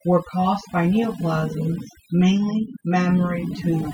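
Overdone noise removal runs throughout the speech. Over-strong noise reduction muted bands near the noise estimate, leaving twinkling specks in near silence and stripping quiet parts of the voice.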